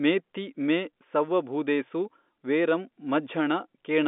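Nothing goes wrong anywhere in this speech clip; it just has the narrow feel of an ordinary phone line, with the sound sitting roughly between 200 Hz and 3.6 kHz, as you'd expect from G.711 telephone coding.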